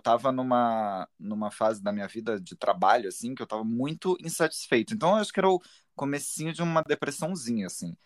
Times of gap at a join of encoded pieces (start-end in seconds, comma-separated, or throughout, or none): 6.83-6.86